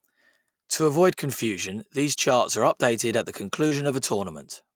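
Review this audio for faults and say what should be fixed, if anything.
Two kinds of fault need fixing.

Lost packet rebuilt from error correction, 2.13 to 2.15 s (between "avoid confusion these" and "charts are updated at") and 3.71 to 3.73 s (after "are updated at the"): a single 20 ms packet went missing each time. The decoder played the low-bitrate copy carried in the following packet, so nothing drops out, but those frames sound rougher and noisier.

Short concealed packet loss, 3.67 to 3.73 s (after "are updated at the"): about 40 ms of audio arrived too late. The receiver extrapolated the preceding sound across the gap, leaving a brief smear or wobble before the rebuilt frame rejoins real audio.

Prevention: reduce packet loss and late arrival on the network path, and give the jitter buffer enough headroom that delayed packets still arrive before they are due to play.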